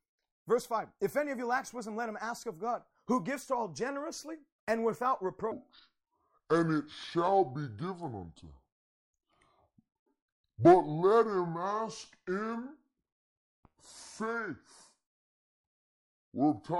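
Speech that abruptly drops into a deep, dragging register from 5.52 s, just after "all generously and without", to the end at 16.79 s. It is a section at the wrong speed: playback runs at 0.658 times normal, lowering pitch by about seven semitones. The likely cause is that stretch being played against a mismatched clock.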